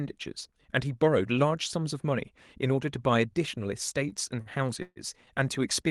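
Repeated stalls (stutter) run from 4.09 to 5.30 s: the jitter buffer ran dry four times, and the receiver stretched the last sound over each wait, about 213 ms in all, the longest 139 ms. Nothing drops out, but the speech drags and stutters.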